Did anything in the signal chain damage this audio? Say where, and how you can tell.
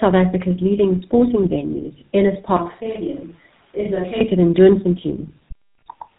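Yes. Throughout, tandem speech coding: the speech went through iLBC, was decoded to G.711 A-law, then re-coded as GSM full rate, so two lossy speech codecs ran back to back. The second one worked on the first's artefacts, leaving it rough, warbly and muffled, with nothing above 3.8 kHz.

From 2.57 to 4.21 s there's a switch to a distant microphone. That's most likely a capture-stage fault where the close mic dropped out. The sound goes suddenly hollow and roomy, drops by about 10 dB, and room noise comes up to roughly 30 dB below the speech, then snaps back.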